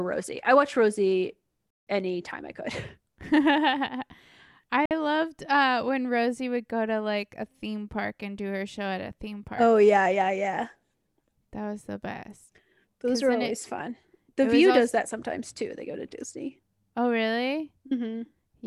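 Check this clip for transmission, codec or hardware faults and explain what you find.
Two brief dropouts interrupt the speech, both consistent with a Bluetooth stall. The first runs from 1.70 to 1.87 s, about 165 ms of silence, just before "anytime I". The second runs from 4.86 to 4.91 s, about 53 ms, just before "loved uh when". Each time the voice cuts cleanly to nothing and then resumes. The likely cause is radio interference delaying packets until the headphones' buffer emptied and playback waited for retransmissions.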